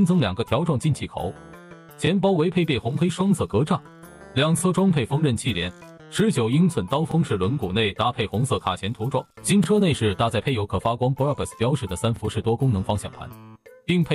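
At 7.11 to 7.14 s, 9.64 to 9.66 s and 12.16 to 12.19 s, the sound jumps back and replays about 25 ms of itself, giving a brief stutter or click each time. This is overlapping chunks: each processed block begins slightly before the previous one ended, so the overlap is heard twice. The even 2.5 s spacing fits fixed 2.5 s chunks. Unlike a dropout, nothing goes missing; the audio briefly repeats instead of falling silent.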